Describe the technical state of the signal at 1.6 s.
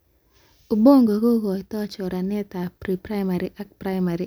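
At 1.6 s the speech signal is intact, with no dropout, distortion, click or level disturbance audible at that point.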